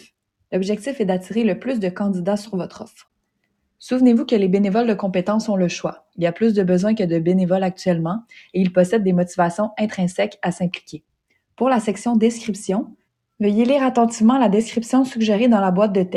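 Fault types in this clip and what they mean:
Sound cut by the noise suppressor: between 10.78 and 11.11 s the suppressor treats part of the sound as noise, pulling it down by about 20 dB for around 150 ms in total.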